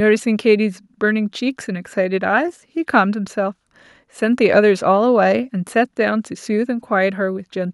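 No technical faults are audible anywhere in this recording.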